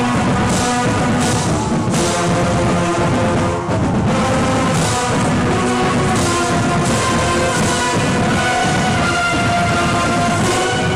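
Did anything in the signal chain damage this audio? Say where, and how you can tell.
No, nothing in the signal chain audibly damaged this audio. None of the stages from capture through to playback leaves a mark that can be heard in the sound.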